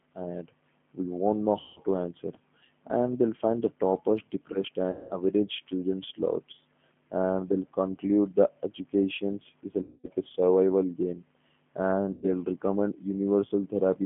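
Throughout the recording the speech carries the G.729 codec sound. The line is confined to roughly 150 Hz to 3.4 kHz, and the audible roughness fits 8 kbit/s G.729A coding. Each 10 ms frame is rebuilt from a vocal-tract filter, a pitch predictor and a handful of pulses, so the voice comes through intelligible but coarse and faintly synthetic, with clearly audible coding damage.

Four dropouts follow, each handled by VoIP packet loss concealment in the speech codec. They fall at 1.60 to 1.79 s, 4.91 to 5.13 s, 9.82 to 10.07 s and 12.13 to 12.25 s, covering about 160, 200, 220 and 100 ms of lost audio. That span fits runs of roughly five to eleven 20 ms packets. In each gap the decoder repeats its last pitch and filter at falling gain, so the sound smears into a fading buzzy tone or coloured noise. Because each frame builds on the one before, the speech stays weak and distorted briefly after real packets resume.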